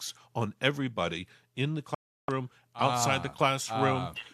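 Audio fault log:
1.95–2.29 s: digital broadcast dropout. Speech mutes for about 0.34 s as the receiver loses good frames, then resumes further on with that stretch missing.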